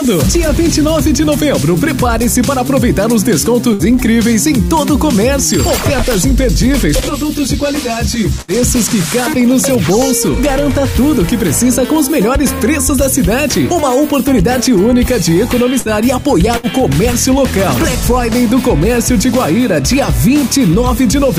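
A burst of packet loss strikes four times: at 3.73 to 3.82 s, 8.41 to 8.53 s, 15.79 to 15.88 s, and 16.57 to 16.66 s. Each time, about 60 ms of audio never arrived in time. The receiver covered the gap by stretching the last sound it had and letting it fade. That fill lasts roughly 57 to 67 ms. It is heard as a brief held buzz or dying hiss. The sound then jumps ahead, with about 60 ms lost each time.

From 18.49 to 19.54 s come GSM signalling bursts. A nearby 2G phone is exchanging short radio bursts with its network, and the audio circuitry picks them up and rectifies them. The result is a galloping dit-dit-dit of short buzzes, pitched at about 217 Hz. It sits roughly 20 dB below the main sound. It lasts just over a second.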